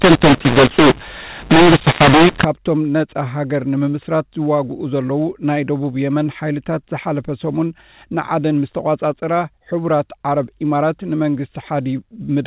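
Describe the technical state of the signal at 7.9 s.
At 7.9 s the speech is intact, with no fault; it carries the narrow, telephone-band sound of G.711 A-law coding, which passes nothing above 4 kHz.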